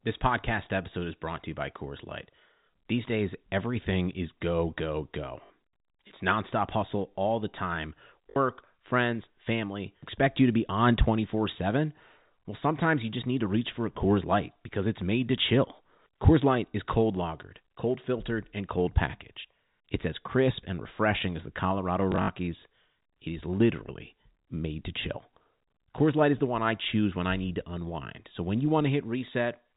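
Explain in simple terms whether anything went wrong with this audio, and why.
Three short robotic stutters come from packet loss with last packet repeated: at 5.46 to 5.50 s, at 8.30 to 8.36 s, and at 22.12 to 22.28 s, where several small repeats are scattered. Each time, bits of audio went missing, and the receiver replayed the last piece it had, which points to 20 ms pieces. That repeat makes a brief buzz rather than a silent gap, which is how it differs from a plain dropout. The telephone-style G.711 coding, limited to sound below 4 kHz, is not at fault.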